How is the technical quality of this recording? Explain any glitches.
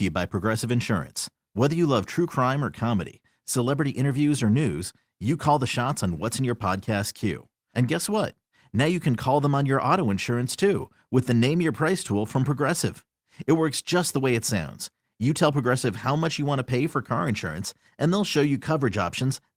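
Listening through the recording, nothing stood out as a technical problem, so there are no glitches to explain.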